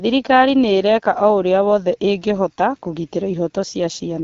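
From start to finish the speech carries AMR wideband (HD Voice) codec damage that is plainly audible. Its rough, raspy texture points to one of the lowest AMR-WB rates, around 8.85 kbit/s, and nothing is present above 7.3 kHz.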